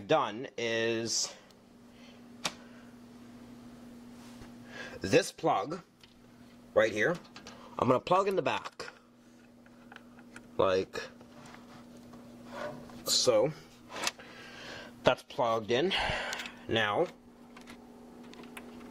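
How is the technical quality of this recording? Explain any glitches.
The recording has no technical faults to report. There are no glitches anywhere in the audio, so there is nothing to explain.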